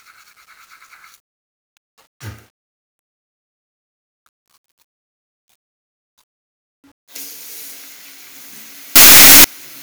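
A short recording of general sounds carries a burst of signed and unsigned mixed up from 8.96 s to 9.44 s. Over that half-second the audio becomes very loud, harsh distortion, with quiet moments blasting at the same level as everything else. The likely cause is 8-bit samples read with the wrong sign convention, flipping the top bit so every zero crossing jumps across the full range.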